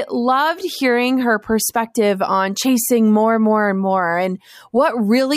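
No technical faults can be heard in the speech. Nothing at any point in the clip calls for comment.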